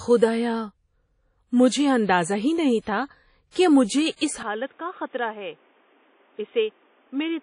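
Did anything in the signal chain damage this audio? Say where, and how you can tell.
Yes, at two stages. Throughout the clip the speech carries plainly audible codec damage: a washy, ringing smear with hiss that rises and falls with the signal, and nothing above 10.1 kHz. This is likely WMA compression at a low bitrate, around 32 kbps. Long transform blocks spread quantisation noise over tens of milliseconds, and weak spectral lines are zeroed. Packet loss would instead cause gaps or glitches at specific moments, while this smear stays constant across the whole clip.

At 4.43 s the capture itself changes, and the change lasts to the end. From that point nothing reaches above 3.7 kHz. The level falls by roughly 10 dB. A new background noise appears about 30 dB below the speech. There is no silence at the switch. This is likely the input switched to a poorer device, such as another microphone or a headset call profile, with a narrower passband and its own noise. 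A codec bitrate drop would narrow the band too, but it would not bring in a fresh noise floor and a level step at the same instant.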